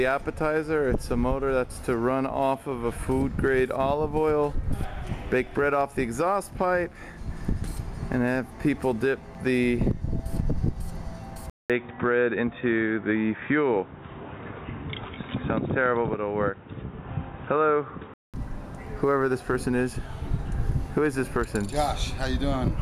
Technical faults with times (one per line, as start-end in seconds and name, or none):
11.50-18.34 input switched to a poorer device